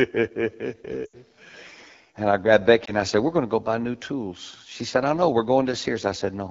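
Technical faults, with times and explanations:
Throughout, AMR wideband (HD Voice) codec: the speech is coded at one of the lowest AMR-WB rates, with a fit near 8.85 kbit/s. The pulse-excited vocal tract model has too few bits, so the voice sounds plainly rough and raspy, with a noise-filled top band.
1.06 to 1.17 s, lost AMR speech frames: a run of corrupted frames, consistent with about four 20 ms frames, made the decoder repeat its last pitch and vocal tract settings at falling gain. The sound drops to near silence within two frames, then returns weak and rough.
2.86 to 2.94 s, lost AMR speech frames: just after "I grabbed", what sounds like a single failed 20 ms frame was concealed by reusing the previous settings. This gives a brief dip or warble before the decoder settles again.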